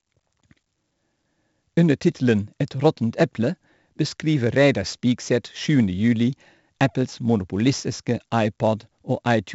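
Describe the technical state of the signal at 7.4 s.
At 7.4 s, as throughout the clip, the speech carries heavy 4-bit ADPCM compression. Each sample is stored as a coarse step from a prediction. The error becomes gritty hiss that follows loud syllables. Nothing sits above 7.7 kHz, which fits a 64 kbps stream.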